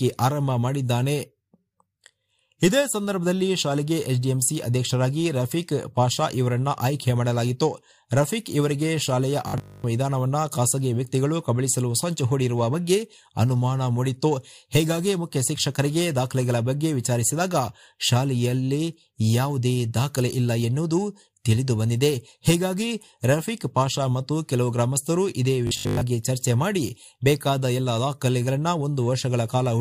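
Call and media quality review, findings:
Robotic sound from repeated short buffers, 9.48–9.84 s and 25.67–26.01 s. Symptom: rigid metallic buzz at 50 Hz lasting about a third of a second each time, the underlying sound only loosely traceable. Likely cause: playout starved of incoming audio, concealment looping the last 20 ms, the 50 Hz rate fitting that loop length. Most of each span is repeated material, with the real audio skipped.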